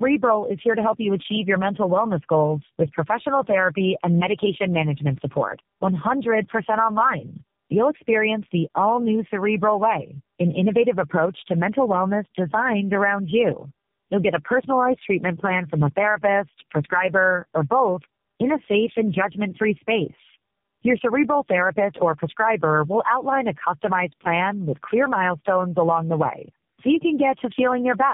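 From start to finish, the speech carries tandem speech coding. It passed through three low-rate speech coders in a row, decoded and re-encoded at each hop. Each coder worked on the last one's errors and added its own. The sound points to a chain like G.729A, G.729A again, then AMR-NB. Nothing reaches above 3.7 kHz, so the speech sounds muffled. It is also rough and grainy, with a warbling, watery quality.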